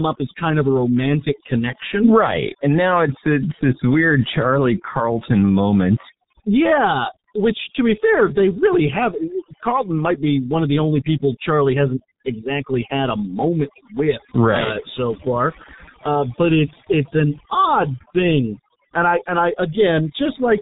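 From start to finish the speech carries two faults at once. The first is overdone noise removal. The suppressor was set so aggressively that any frequency band near its noise estimate is pushed almost to nothing, taking the softer parts of the voice with it. The pauses fall to near silence dotted with twinkling specks. That sparkle sets it apart from a plain noise gate, which shuts the whole signal at once rather than flickering band by band.

Under that sits heavy G.723.1 codec damage. Nothing above 3.8 kHz survives, and the coarse voice model, whose sound points to a rate around 6 kbit/s, leaves the speech muffled and hoarse with smeared consonants. It is not simply a low-pass filter, which would dull the top without the hoarse, frame-by-frame roughness. It also lacks the sharp hiss-like swirl of a modern codec starved of bits, sounding instead like an old internet phone call.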